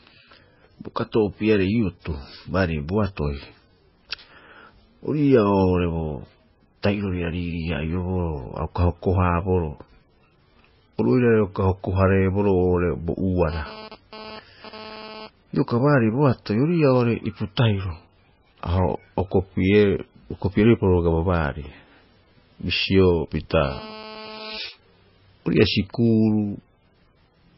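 Throughout the speech, the sound is watery and swirly, with smeared onsets and nothing above 5.6 kHz. This is likely heavy MP3 compression: starved of bits, the encoder cut the treble and let weak frequency lines flicker on and off between frames, which fits a bitrate around 16 kbps.

From 13.5 to 15.27 s, a hard, raspy buzz at about 217 Hz, rich in harmonics and about 16 dB below the speech, cuts in and out. This is GSM phone buzz from a nearby 2G phone transferring data. The audio circuitry rectifies its radio bursts, so the buzz comes and goes with them.

From 23.53 to 24.58 s, the same GSM phone buzz returns, steady this time, as during a call, again at about 217 Hz and about 16 dB below the speech.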